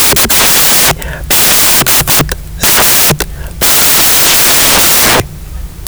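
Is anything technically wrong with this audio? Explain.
Yes. From start to finish, this speech clip suffers from samples built from the wrong bytes. The reader is assembling each sample incorrectly, whether through a one-byte offset, swapped byte order or a mismatched alignment. As a result the rapidly fluctuating low-order bits end up as the most significant part of every value. The speech comes out as loud, harsh broadband noise, close to white on the louder sounds.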